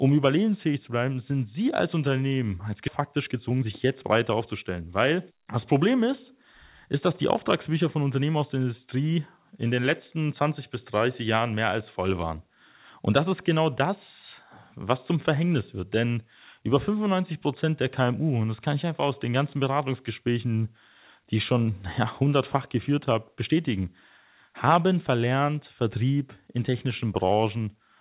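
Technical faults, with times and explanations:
2.88 s, skip ahead: the speech jumps forward with no gap, roughly 0.7 s simply dropped and the two sides butted together, so a chunk of what was said just vanishes.
3.00–5.19 s, jitter buffer speed-up: the buffer was running long after that jump, so it trimmed tiny pitch-period slices, about 0.3 s in all, and the talking sounds hurried at around 115% speed with the same pitch.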